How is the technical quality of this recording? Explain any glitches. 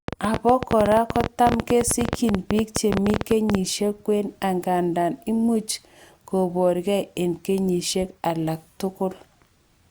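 The technical quality suffers from one clear glitch near the start. From 0.08 to 3.56 s, before "kwen angandan imuch koborkei", a train of clicks, about 50 irregular pulses at roughly 13 per second, ticks through the speech and pauses. It likely comes from nearby interference. The clicks peak about 15 dB above the signal and show as thin vertical spikes on the waveform and spectrogram.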